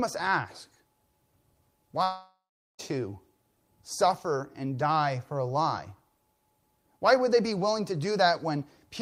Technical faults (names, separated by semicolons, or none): long network dropout